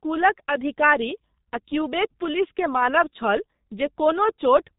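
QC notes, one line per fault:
Throughout, G.723.1 codec: the speech is heavily muffled and hoarse, with smeared consonants. Nothing passes above about 3.8 kHz. The damage fits a low rate near 6.3 kbit/s, where long 30 ms frames and a slowly updated voice model blur fast detail.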